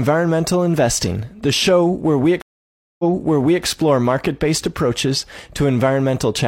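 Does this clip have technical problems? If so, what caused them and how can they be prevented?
Yes. A stream reconnect spans 2.42 to 3.64 s. The connection dropped, leaving 0.57 s of silence. A fresh decoder then resumed 0.65 s earlier from a resent burst, repeating audio. Deeper client buffering and resuming from the exact last-received position would prevent this.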